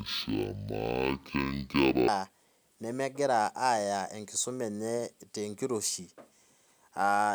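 From 0.0 to 2.08 s, stereo is read as mono. Left and right samples run as one channel, so the speech plays at half speed, an octave low.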